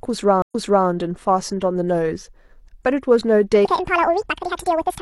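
A speech recording with two faults. At 0.42 s a stream reconnect broke the connection and restarted the decoder, leaving an 80 ms silence before the audio resumes 0.37 s earlier, repeating material, through 0.87 s. From 3.65 s to the end, a section at the wrong speed, likely from playback fitted to the wrong clock, runs 1.87 times fast, raising pitch by around ten semitones.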